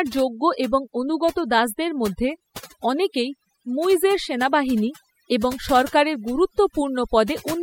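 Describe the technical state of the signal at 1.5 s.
At 1.5 s the speech carries overdone noise removal. It is not a local event; it runs through the whole clip. A noise reduction stage was pushed too hard. Any frequency band close to its noise estimate gets cut deeply or switched off. Softer parts of the voice fall below that line and vanish with the noise. The background drops, dotted with twinkling specks.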